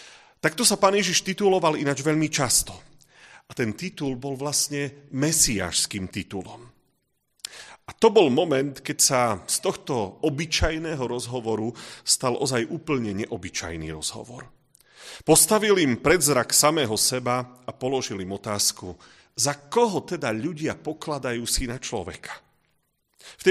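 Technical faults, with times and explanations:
Nothing stood out on listening to the speech in this recording.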